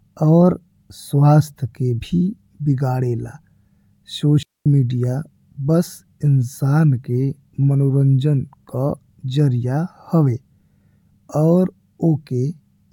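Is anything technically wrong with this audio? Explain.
Yes. From 4.43 to 4.66 s, a digital wireless dropout: the receiver lost too much data and muted for 0.23 s, leaving a clean, noise-free hole in the speech.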